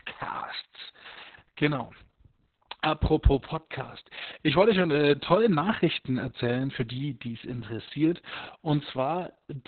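This is a speech clip with Opus voice compression from start to finish. The damage is heavy. The band stops at about 4 kHz, so the speech sounds muffled and thin. The coarse excitation coding makes it hoarse and slightly robotic. These traits fit the SILK coder in narrowband mode at a very low rate, around 6 kbps, probably with long frames of about 60 ms.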